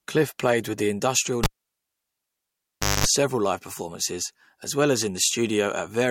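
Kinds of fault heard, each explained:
Cable pulled and plugged in, 1.44 to 3.07 s: after "played with the industrial" a pop cuts the speech to near silence for about 1.58 s, then roughly 0.22 s of 50 Hz mains buzz as the plug's tip touches, and a second pop before "live performances as well".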